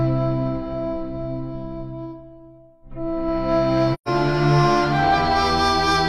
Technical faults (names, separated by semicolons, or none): AAC frame loss with muting